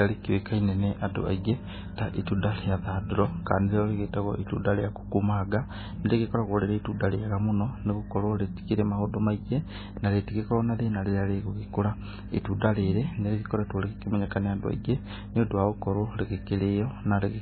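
Speech throughout carries heavy MP3 compression damage, likely from a very low bitrate around 16 kbps: nothing remains above 4.5 kHz, and the watery, swirling texture and smeared s sounds separate it from a clean low-pass filter, which dulls without warbling.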